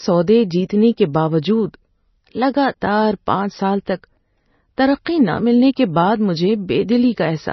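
Throughout the speech, the audio has likely gone through heavy MP3 compression, at a bitrate that fits roughly 24 kbps. Short of bits, the encoder cut everything above 5.9 kHz and dropped weak frequency lines, leaving a dull, watery, swirling sound.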